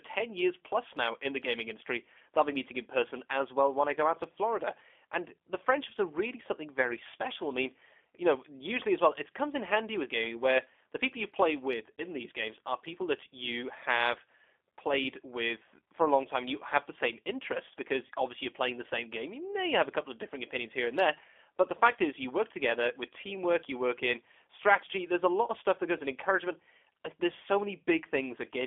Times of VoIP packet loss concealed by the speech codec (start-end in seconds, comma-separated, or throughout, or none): 11.95-12.04